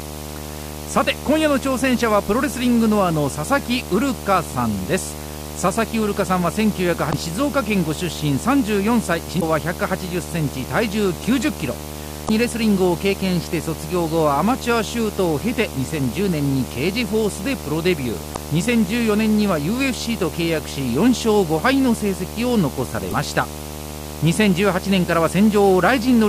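Video or display buzz runs through the whole speech clip. A screen or video cable is coupling its picture timing into the audio path, so a buzz at the 75 Hz field rate sits under everything, with a gritty hash riding above it. It is loud, only roughly 10 dB below the speech, so it stays audible through quiet gaps and under the voice alike.

Damaged data in a compressed stream breaks in at 7.09, 9.37, 12.25, 18.33 and 23.08 s, each burst lasting about 0.05 s. At each point part of the compressed stream has been corrupted, so the decoder misreads its frames, loses sync and hunts for the next valid frame header. The result is a short chirp or squawk.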